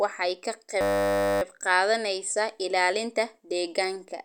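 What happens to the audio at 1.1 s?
At 1.1 s the system has hung: the machine or its audio driver froze while the sound hardware kept replaying the same small ring buffer. From 0.81 s to 1.42 s, between "waxay ka" and "qaadanaysaa ilaalinta", a 10 ms slice of speech repeats about sixty times. Because each loop is so short, this system hang loop sounds like a steady 100 Hz buzz replacing the speech. When playback resumes, little if anything is missing.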